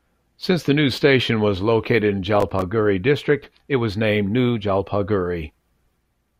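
At about 2.36 s the speech picks up a short burst of processor overload crackle that runs until roughly 2.62 s, so about a quarter of a second. What's happening is the processor falling behind and missing a string of buffer deadlines, somewhere around ten of them. The sound points to tiny buffers of just a few milliseconds, each dropping out to silence with hard edges. Strung together, those little gaps come across as a gritty, tearing crackle over the voice that clears once the load eases.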